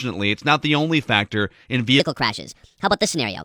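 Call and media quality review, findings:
Wrong sample rate from 2.00 s to the end (3.45 s): speech suddenly goes chipmunky, about 1.38x faster and roughly 5.5 semitones higher. Playback path is clocking samples out too fast with no resampling, which fits 32 kHz audio pushed out at 44.1 kHz.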